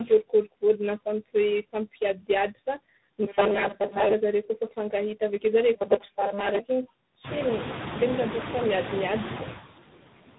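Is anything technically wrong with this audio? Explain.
Yes, two faults run through the whole clip of speech.

Noise suppressor artifacts are present from start to finish. The suppressor pulls down bands it judges to be steady noise by about 20 dB, frame by frame, so the background drops out between words and returns beneath them. The room noise rises around 7 s, ending roughly 11 dB under the speech. On a spectrogram the pauses look nearly black, with isolated flickering specks of residue.

Tandem speech coding is also present throughout. The speech passed through two speech codecs in sequence, an AMR-NB-style low-rate coder and then G.726, with each one re-encoding the previous one's damage. The result sounds rough, muffled and warbly. A spectrogram shows a hard ceiling near 3.9 kHz and smeared, blurry harmonics.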